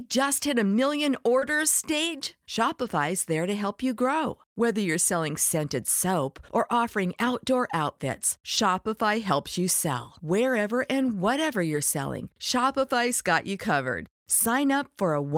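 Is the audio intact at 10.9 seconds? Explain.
Yes, at 10.9 seconds the speech plays through cleanly, with no dropout, click, distortion or other fault audible at that point.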